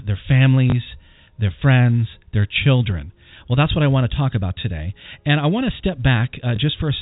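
Packet loss with the last packet repeated occurs at 0.70 and again at 6.56 seconds, each a single 20 ms gap refilled by replaying the previous packet. Each single repeat sounds like a small blip over the telephone-band audio.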